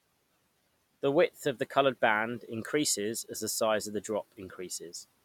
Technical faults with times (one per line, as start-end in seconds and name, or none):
none